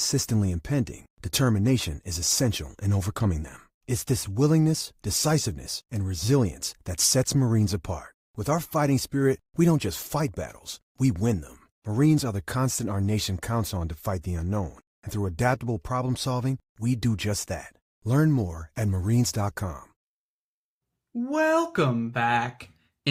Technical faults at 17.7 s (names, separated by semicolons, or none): none